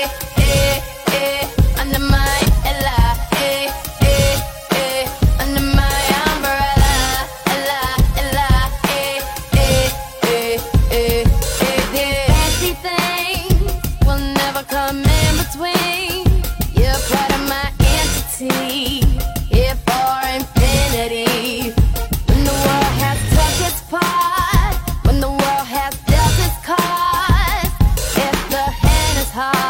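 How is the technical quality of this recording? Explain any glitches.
There's one glitch. At 2.41 to 2.46 s, damaged data in a compressed stream makes the decoder misread frames and lose sync, giving a brief glitch.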